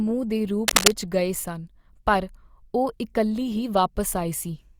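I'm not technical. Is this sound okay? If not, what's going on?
No. Cable scratch noise from 0.68 to 0.93 s: a quick burst of scratchy, rustling crackle, louder than the speech. It's likely a worn cable or plug being moved, its loose contact flickering and spraying ragged noise into the signal.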